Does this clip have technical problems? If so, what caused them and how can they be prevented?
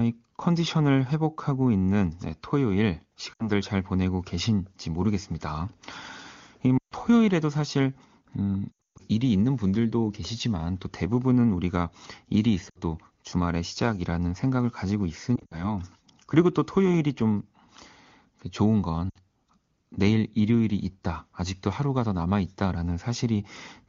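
Yes. The speech briefly smears, warbles and fades at 3.34–3.50, 6.78–6.94, 8.71–9.02, 12.69–12.78, 15.35–15.73 and 19.10–19.18 s. These are lost AMR speech frames. Radio errors corrupted frames, so the wideband decoder repeated its last good settings with falling gain, then recovered roughly. Stronger radio coverage or more robust channel coding would prevent this.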